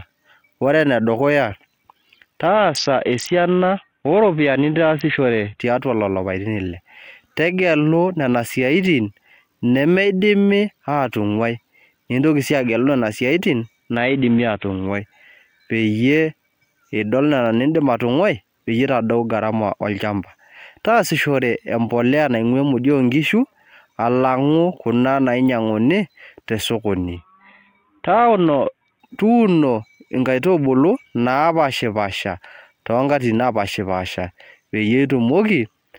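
Three times the Bluetooth link congested and the SBC bit pool dropped, from 2.46 to 5.60 s, 13.97 to 14.87 s, and 27.16 to 29.0 s. The starved upper sub-bands dull the speech's treble and coarse quantisation adds gritty noise, consistent with a bit pool near 5, around 54 kbps.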